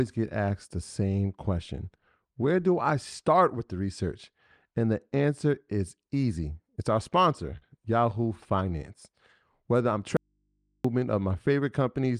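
At 7.57 to 7.73 s there is short concealed packet loss. About 40 ms of speech arrived too late, so the receiver filled the gap by stretching the preceding sound, and a brief smear results. On a spectrogram the preceding sound looks copied and smoothed across the patch.

From 10.17 to 10.85 s the speech cuts out abruptly for about 0.68 s, an audio dropout to a faint residue, likely a break in the signal while the input stayed live. Only mains hum remains, roughly fifty decibels down. The waveform collapses to a thin trace, and the spectrogram shows steady low lines.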